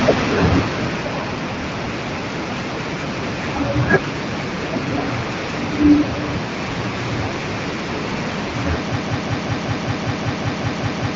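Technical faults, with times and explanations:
0.05–1.35 s, automatic gain falling: the gain control judged the opening input too loud or too noisy and pulled its gain down gradually, by about 7 dB over 1.3 s. The speech starts loud and then sinks, with the background sinking along with it.
8.96 s to the end, broken-record loop: the stream most likely stalled and kept resending the last fragment it held. A 191 ms piece of speech repeats exactly, back to back, twelve times through the close of the clip, and the speech that should have followed is lost.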